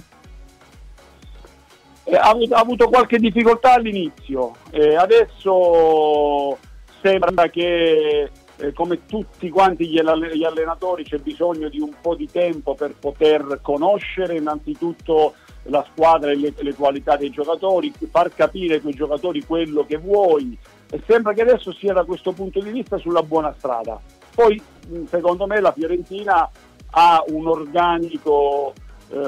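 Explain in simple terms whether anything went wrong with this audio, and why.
Something did go wrong, briefly. From 7.21 to 7.38 s there are frames out of order. Two neighbouring chunks of about 85 ms each played in swapped order. That stretch sounds like a garbled flutter. No time goes missing.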